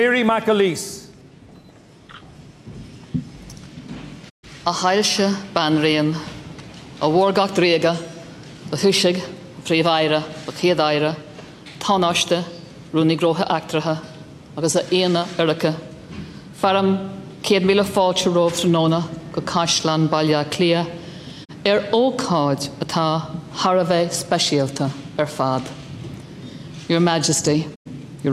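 Three digital broadcast dropouts interrupt the audio: a mute from 4.28 to 4.45 s, a briefer one at 21.44 to 21.51 s, and another from 27.74 to 27.88 s. Each time the sound fades out over about 20 ms and stays silent until the receiver recovers valid frames. The gaps of 128, 32 and 96 ms point to four, one and three lost frames of 32 ms each. The programme material in those holes is gone for good.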